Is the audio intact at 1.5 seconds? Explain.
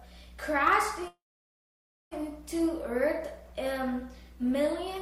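No. A call audio freeze runs from 1.07 to 2.13 s, so 1.5 s falls inside it. The last sound before the stall is stretched into a brief fading buzz or hiss, then dead silence covers about 0.93 s of the gap. The likely cause is packets held up in transit, letting the receiver's jitter buffer run dry. When they arrive, playback resumes where it stopped. Nothing is lost, but everything after lands about 1.04 s late.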